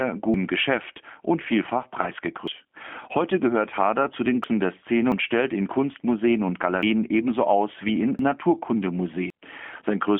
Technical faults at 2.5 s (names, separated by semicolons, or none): G.729 codec; dropped buffer (overrun)